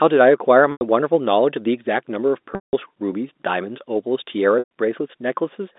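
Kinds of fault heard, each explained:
Packet loss with pitch repetition: Stretches of speech never reached the receiver, so it filled each gap by looping the last pitch period and fading that loop away. Here the gaps run about 90, 180 and 120 ms, which fits whole 30 ms packets going missing. The shortest sounds like a briefly held, buzzy tone. The 180 ms one decays toward silence before speech cross-fades back. A plain dropout would cut straight to silence with no sustained buzz.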